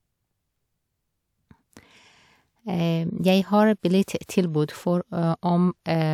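Speech, with no technical fault to report anywhere in the recording. Nothing in it breaks, drops out or distorts at any point.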